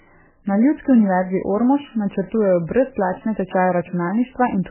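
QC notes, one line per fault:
Throughout, MP3 compression: the speech has nothing above 3 kHz and sounds heavily watery and swirly, with smeared attacks. That's likely an MP3 encoder starved of bits, as fits a bitrate around 8 kbps, cutting the treble and zeroing weak frequency lines frame to frame.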